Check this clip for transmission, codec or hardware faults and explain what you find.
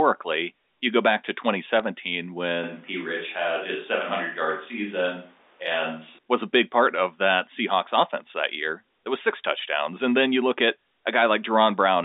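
Two faults show up here, both over a telephone-band line.

At 1.79 s there's a sharp tick from bit errors on the digital phone line. A few flipped bits corrupted individual samples, leaving a brief click over the speech.

From 2.64 s to 6.18 s the sound turns roomy and hollow, with room noise about 30 dB below the speech but little level change. That's likely a switch to a distant microphone, cutting back cleanly afterwards.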